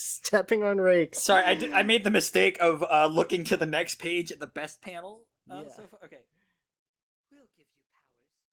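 No technical faults are audible in this speech.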